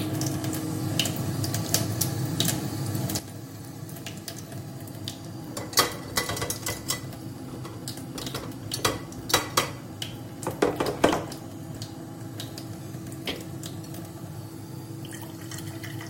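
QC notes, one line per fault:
3.19 s to end, sudden gain jump: at 3.19 s the level drops by about 9 dB in a single step and stays there for the rest of the clip. The sounds and the background noise fall together, with no fade or ramp between the two levels, so the floor itself steps down at the same instant. That points to a digital gain change applied from one sample to the next, likely a setting change or bit shift made without smoothing.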